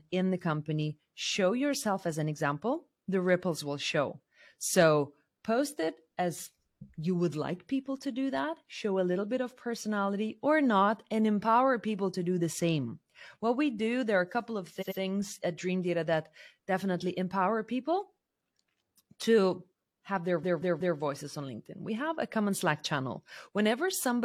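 At 14.77 s there's a stutter from repeated frames. A chunk of compressed audio got sent again, so a 92.9 ms block, which fits about two codec frames, plays two extra times and adds 185.8 ms. At 20.39 s it's worse: a 185.8 ms block, which fits about four frames, repeats three more times, stretching things by 557.3 ms.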